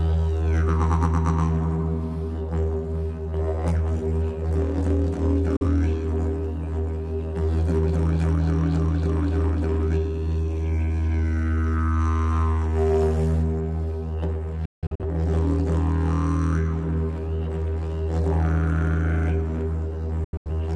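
Abrupt, near-instant mutes hit at 5.57 s (about 43 ms), from 14.65 to 15.05 s as broken holes totalling 256 ms, and from 20.24 to 20.55 s as 171 ms of gaps. This is digital broadcast dropout: the receiver muted whenever it lost the signal or frames arrived corrupted.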